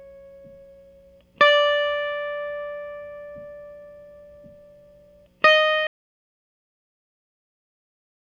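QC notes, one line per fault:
5.87 s to end: audio dropout to silence. The music cuts off mid-flow into silence with no room tone, likely from lost input while recording continued.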